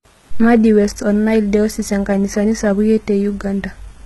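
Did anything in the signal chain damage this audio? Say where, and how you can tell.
Yes, at the codec stage, for the whole clip. The speech has treble, but it sounds synthetic: s sounds come out gritty and lispy, with a metallic edge, and the spectrum stops at about 11.8 kHz. That pattern is most likely HE-AAC compression at a very low bitrate, consistent with around 16 kbps. Spectral band replication rebuilds the upper band from copied lower bands under a coarse envelope, so harmonics misalign above the crossover. A plain low-pass would sound dull instead.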